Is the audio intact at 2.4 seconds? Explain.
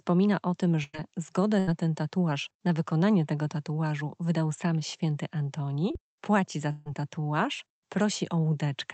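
Yes, the speech at 2.4 seconds is intact, with no dropout, glitch or other fault at that moment.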